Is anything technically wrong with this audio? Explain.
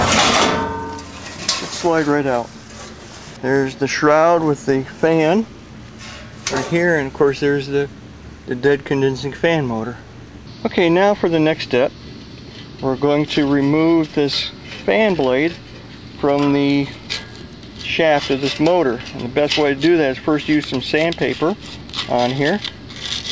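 No, nothing technically wrong is audible anywhere in this clip.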